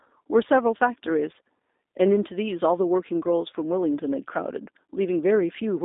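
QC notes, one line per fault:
Throughout, G.729 codec: speech confined to 250 Hz–3.7 kHz, nothing above 3.8 kHz; pulse-based resynthesis leaves it plainly rough and synthetic, consistent with 8 kbit/s G.729A.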